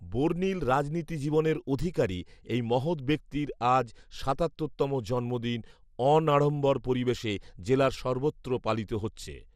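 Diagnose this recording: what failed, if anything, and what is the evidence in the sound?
Codec stage: throughout the speech, dull, gurgling granular distortion, likely MP2 compression at a low rate such as 80 kbps; a spectrogram shows upper sub-bands flickering on and off.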